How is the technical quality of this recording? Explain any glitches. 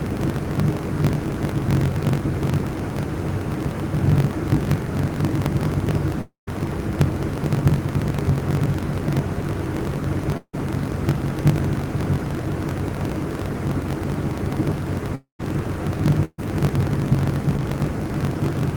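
The technical quality is poor. A steady fault runs through the whole clip, and several gaps interrupt it.

A block size mismatch (truncated) is present from start to finish. One stage writes longer blocks than the next stage reads. The tail of each block is dropped. Each cut lands at the same rate, so a buzz at about 46.9 Hz sits under everything. That rate fits 1024-sample reads at 48 kHz. Because material is discarded, the audio runs about 1.12 times fast, with its pitch close to normal.

Three gaps sound like a long network dropout. They occur at 6.21 to 6.49 s, 10.37 to 10.55 s and 15.15 to 15.41 s. Each is likely caused by a stretch where no audio arrived. The receiver extends the last sound as a fading buzz or hiss. Then comes true silence, about 140 ms, 60 ms and 120 ms in turn. The audio resumes further on, with about 260, 160 and 240 ms lost.

A burst of packet loss occurs at 16.25 to 16.40 s. 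Roughly 140 ms of audio failed to arrive in time. The receiver carries the previous sound forward and turns it down. It ends in about 40 ms of silence before the audio picks up again, past the missing part.

Short concealed packet loss occurs at 17.57 to 17.60 s. About 20 ms never reached the decoder. It was patched by continuing the prior sound, then blending back. It is heard as a brief smear or wobble.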